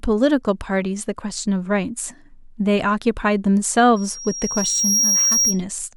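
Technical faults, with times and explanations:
3.96–5.62 s, loudspeaker feedback squeal: a tone at 5.6 kHz swells over roughly a second until it stands about 5 dB above the speech. The microphone is hearing its own loudspeaker, and at that frequency the loop gain passes one, so the tone feeds itself and keeps growing.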